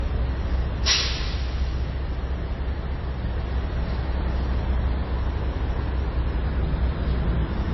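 All the way through, the sound carries the layered smear of transcoding between lossy codecs, likely a low-rate MP3 pass that was re-encoded as low-rate Vorbis. Nothing comes through above 5.8 kHz, so it's dull, and the grainy swirl of one encoder sits on top of the other's.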